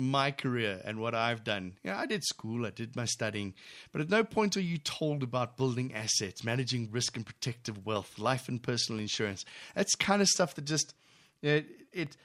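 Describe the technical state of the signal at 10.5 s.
At 10.5 s the speech sits inside a run of periodic USB or driver dropouts lasting from 7.97 s to 12.07 s. Something blocks the USB bus or audio driver about every 1.02 s. Each time, a brief slice of audio, well under a millisecond, is replaced by silence. There are about five across the span. They come through as evenly spaced ticks over the speech.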